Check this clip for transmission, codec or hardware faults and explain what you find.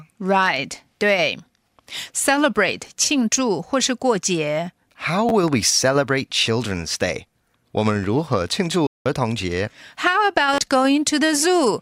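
Playback faults are present: three repeated buffers and one playback stall, all in the output path rather than in the codec.

Repeated buffer, 5.29 to 5.31 s, just before "we celebrate": fresh audio arrived late, so a roughly 10.7 ms block, which fits a 512-sample buffer, was replayed twice more. The result is a brief buzzy stutter that swallows about 20 ms of speech.

Repeated buffer, 8.03 s, between "我们" and "如何庆": the same late-data replay happened once, giving a single hard click where about 10 ms goes missing.

Repeated buffer, 10.54 to 10.58 s: the block was replayed four extra times, so the buzz lasts longer and about 40 ms of audio is lost.

Playback stall, 8.87 to 9.06 s, between "们如何庆" and "童节": the player likely ran dry or its thread was blocked, cutting the sound to silence for about 188 ms mid-flow before it resumed.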